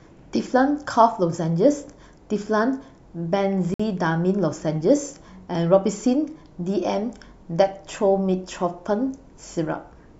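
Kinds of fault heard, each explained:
Bluetooth stall, 3.74 s: the speech cuts to silence for 54 ms, likely because interference delayed packets and the headphones' buffer ran dry.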